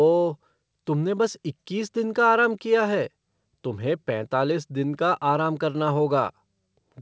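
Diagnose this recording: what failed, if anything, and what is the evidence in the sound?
Nothing failed; the call path's 8 kHz ceiling is expected.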